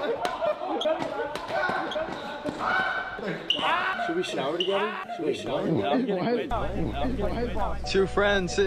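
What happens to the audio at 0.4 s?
A doubled audio track runs through 0.4 s and the whole clip: a second full-band copy trails about a second behind, roughly 5 dB quieter, likely from a slower capture path.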